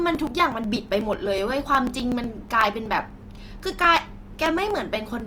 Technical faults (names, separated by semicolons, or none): Opus compression; periodic USB or driver dropouts